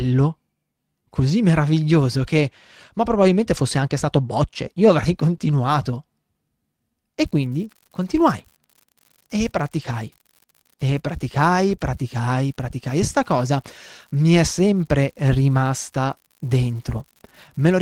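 It's a speech recording with three kinds of transmission damage. Several spots are a lost packet rebuilt from error correction: at 3.23 to 3.25 s (between "così meraviglioso che ma" and "fosse anche stato bocce"), 5.33 s, 5.41 to 5.47 s, 9.79 to 9.93 s, 11.07 s and 13.19 s. The next packet carried a low-bitrate backup copy, so there's no gap, just a rougher, noisier patch. The longest one, about 80 ms at 9.8 s, comes from four separate packets going missing. Wedged in at 5.37 to 5.41 s is a short concealed packet loss, where nothing arrived for about 20 ms and the decoder extrapolated the previous sound to bridge it, giving a quick smear or wobble. From 7.25 s to the end there's an unreliable data bit. A flaky bit line flips at random, throwing equal-sized spikes that add a steady crackle that doesn't stop in the pauses.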